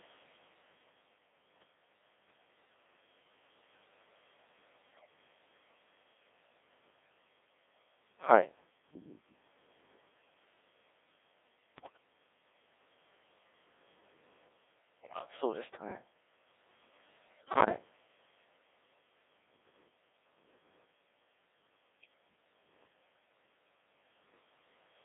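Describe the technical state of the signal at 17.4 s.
At 17.4 s you're inside a burst of bit errors on digital voice radio, running from 17.28 to 17.78 s. Flipped bits, around one in ten, hit the vocoder's pitch, level and voicing parameters, so each frame comes out wrong. The result is a half-second of bleeping, warbling robotic gibberish with jumps in pitch and loudness. That fits about eleven corrupted frames.

Underneath that, the whole clip is carried by the Codec 2 vocoder, and it sounds like the 1.6 kbit/s mode. Only pitch, voicing, energy and a spectral envelope make it through, and the decoder rebuilds the speech from sine waves. So even the clean parts sound heavily buzzy and robotic, squeezed into roughly 250 Hz to 3.6 kHz.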